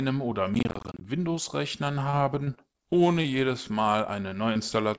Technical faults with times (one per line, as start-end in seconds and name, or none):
0.54-1.04 processor overload crackle
2.00-3.31 repeated packet loss (robotic sound)
4.29-4.59 short concealed packet loss
4.96-4.99 short concealed packet loss